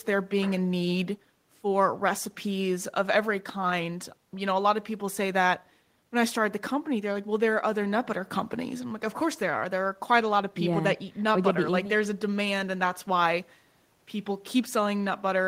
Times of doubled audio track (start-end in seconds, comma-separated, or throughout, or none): none